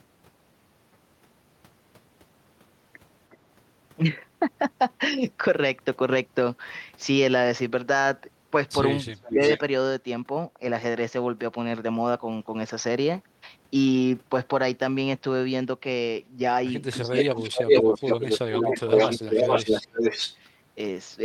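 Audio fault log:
3.3–3.37 s, 9.15–9.58 s, 17.18–20.36 s, echo leak: delayed copies of the speech arrive 362, 394 and 444 ms late. They grow from faint to louder than the talker, likely residual echo the far end's canceller missed. The spectrogram shows time-shifted repeats of the harmonic striations.
9.3–9.41 s, 17.01–18.05 s, 18.5–20.11 s, speech suppressed in double talk: the talker's level dips by about 10 dB, then by about 20 dB, while the echo overlaps, likely the canceller turning both down. The waveform shows sudden envelope troughs, and the spectrogram shows dimmed bands.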